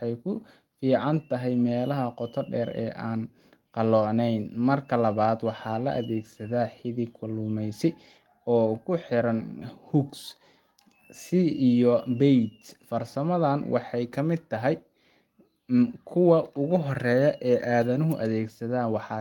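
Speech recording with no technical faults to be heard.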